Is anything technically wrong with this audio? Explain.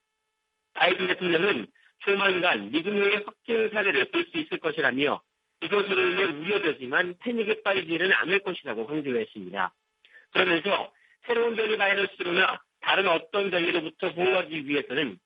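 No, nothing is technically wrong with this audio.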